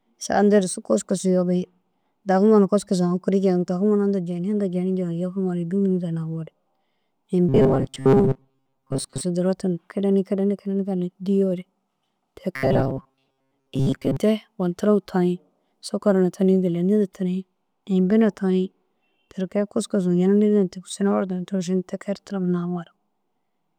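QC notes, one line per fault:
7.49–9.21 s, robotic sound from repeated short buffers: speech becomes a rigid metallic buzz at 134 Hz, likely from a roughly 7.5 ms chunk replayed while most real audio is skipped. A spectrogram shows flat harmonic stripes.
12.56–14.17 s, robotic sound from repeated short buffers: the same 134 Hz buzz returns, likely from one short buffer repeated in place of most new audio. The waveform shows identical periodic cycles.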